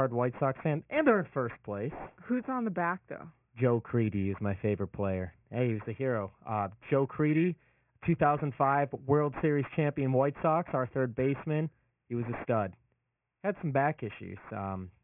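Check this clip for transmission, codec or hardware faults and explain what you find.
Throughout the speech, sibilants and other high sounds turn gritty and metallic, with harsh tones that don't belong to the voice, and the spectrum runs hard right up to 3 kHz. This is aliasing. The sample rate was reduced without first filtering out content above half the new rate, which fits a drop from 48 kHz to 6 kHz. Everything above 3 kHz folds back below it at unrelated frequencies, sitting roughly 20 dB under the speech.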